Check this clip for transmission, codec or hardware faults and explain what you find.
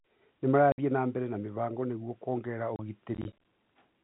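Two kinds of transmission fault are present in this speech, one from the network and one from the playback hardware. The audio passes through G.711 A-law telephone coding, which caps the band at 4 kHz.

Packet loss filled with silence happens twice. From 0.72 to 0.78 s, 60 ms of audio never arrived, which fits two consecutive 30 ms packets going missing. At 2.76 to 2.79 s a single 30 ms gap follows. The receiver had nothing to play, so it inserted silence, and the speech drops out abruptly. Each hole is a whole number of packet lengths, with hard edges.

Processor overload crackle runs from 3.15 to 3.45 s. The processor fell behind and repeatedly missed its deadline for filling small output buffers, which points to buffers of around 10 ms and roughly ten misses across this stretch. Each missed buffer was output as silence, so the speech is punctured by a rapid string of tiny gaps with sharp edges. 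Together they sound like a gritty crackling tear over the sound that stops once the load eases.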